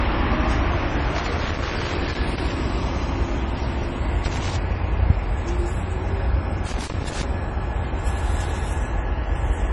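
From the start, the audio stops dead above 11.3 kHz, and that dull top end runs the whole clip. This is low-bitrate audio saved at a high bitrate. The likely cause is a 32 kbit/s MP3 re-encoded at 320 kbit/s. The larger file cannot restore the discarded treble.

Loose connector crackle arrives from 1.16 to 2.52 s, then from 4.24 to 4.56 s, and again from 6.66 to 7.24 s. A dirty or worn contact is making and breaking. The signal chops in and out. Each burst sounds like irregular scratchy crackling.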